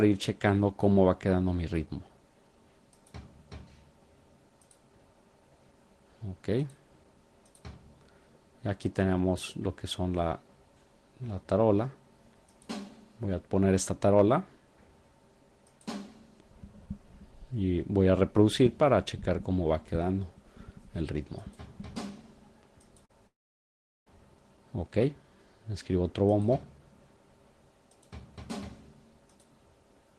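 At 23.05 to 23.11 s, about 40 ms of the stream failed to reach the decoder in time, a short concealed packet loss. The receiver bridged the gap with roughly 37 ms of synthesized continuation, extending the preceding sound by its pitch or as shaped noise, then cross-faded back into the real signal. The result is a brief smear or wobble lasting a few hundredths of a second, where a short transient may simply disappear.

From 23.27 to 24.08 s comes a long network dropout, likely caused by an interruption in delivery that left about 800 ms of audio missing. The receiver's concealment briefly carries the last sound forward as a fading buzz or hiss, but this gives out quickly, and about 750 ms of the gap is silence. When the signal returns, it resumes further along, with the lost portion absent.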